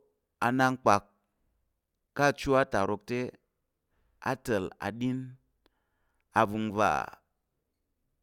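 Listening to this speech recording, nothing stood out as technically wrong at any point.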